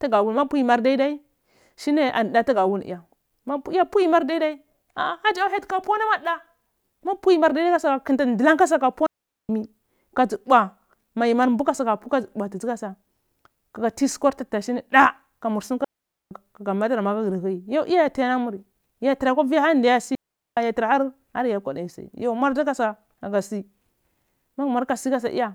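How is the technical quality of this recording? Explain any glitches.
The recording has three digital wireless dropouts, at 9.06 s, 15.84 s (just after "kanur sum") and 20.15 s. Each is a clean mute lasting about 0.43 s, 0.47 s and 0.42 s respectively. The radio link lost more data than the receiver could conceal, so it faded the speech down to near silence within a few milliseconds. No noise burst, click or hiss surrounds the gaps. The speech simply vanishes and returns.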